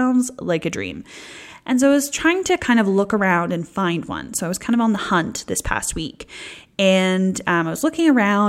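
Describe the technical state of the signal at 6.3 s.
At 6.3 s the speech signal is intact, with no fault to be heard at that moment.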